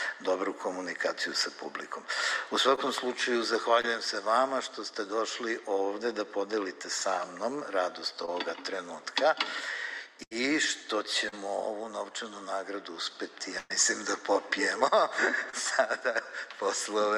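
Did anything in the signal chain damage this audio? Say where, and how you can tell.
Yes. The network stage dropped short packet loss runs, and the receiver covered each gap by extending the preceding sound. This short concealed packet loss shows as brief smears or wobbles at 2.75–2.79, 3.81–3.85, 8.25–8.29, 11.29–11.34 and 15.50–15.55 s, each replacing 20 to 40 ms of audio.

Two longer runs of lost or late packets form a burst of packet loss at 10.23–10.33 s (80 ms missing) and 13.58–13.72 s (120 ms missing). The concealment holds the last sound as a fading buzz or hiss, then the audio resumes further on with that stretch gone.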